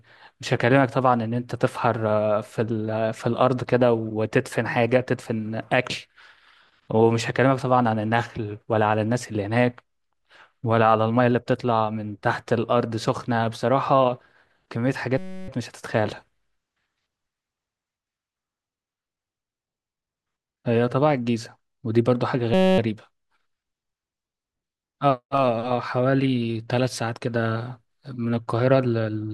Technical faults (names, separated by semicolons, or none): system hang loop